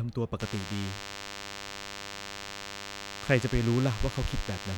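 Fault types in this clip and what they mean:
DECT cordless phone buzz: a thin, steady 100 Hz buzz packed with harmonics sits under the speech from about 0.39 s to the end, quite prominent at roughly 10 dB below it, as the audio circuit rectifies a nearby phone's radio bursts every 10 ms.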